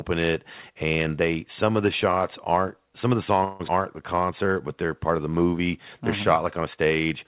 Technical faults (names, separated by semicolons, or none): call audio freeze; skip ahead; jitter buffer slow-down